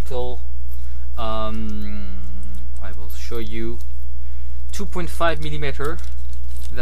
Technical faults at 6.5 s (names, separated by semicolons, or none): mains hum